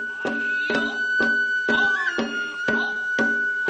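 Short concealed packet loss hits first at 1.85 to 1.88 s: about 20 ms of audio never arrived, and the receiver bridged it by extending the preceding sound before blending back. You hear a quick smear or wobble. The same thing recurs at 2.61 to 2.65 s and again at 2.93 to 2.97 s, each with roughly 20 ms gone.

Between those two, at 2.71 to 2.75 s, there's a short stall from a late packet. The jitter buffer ran dry, so the last sound got held about 19 ms longer until the packet turned up. Nothing is lost there, just a brief drawn-out moment with a slight buzz or dip.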